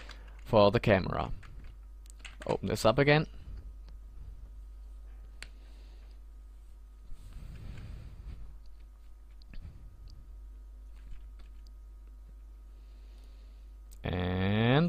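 No technical faults can be heard anywhere in the audio.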